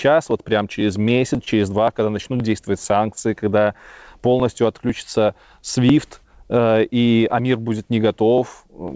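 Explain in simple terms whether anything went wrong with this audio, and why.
Something on the computer kept interrupting the USB connection or the audio driver about every half second, a problem known as periodic USB or driver dropouts. Each time, a couple of milliseconds of speech were skipped outright, from 0.31 s through to 8.88 s, about twenty times in all. You hear this as a steady, clock-like ticking running under the speech. It sounds only while someone is talking, since a gap in silence leaves nothing to hear.

The call connection also had three moments where a packet of audio arrived late. Each time, the receiver held the last bit of sound until the packet caught up, then carried on from the same spot. This is a short stall from a late packet. It happened at 1.02 to 1.07 s (28 ms), 1.44 to 1.49 s (22 ms) and 2.37 to 2.41 s (24 ms). Nothing is lost, but a sound briefly drags or buzzes slightly, an effect heard through the call's usual slightly muffled top end.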